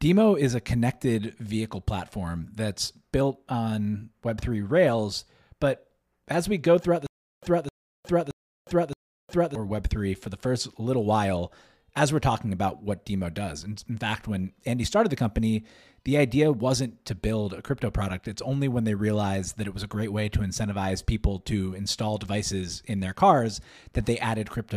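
From 7.07 to 9.55 s a stutter with silent gaps: one 0.26 s burst repeats four times with 0.36 s of dead silence between, likely a stalled stream replaying its last fragment; unlike plain dropouts, the same sound returns each time.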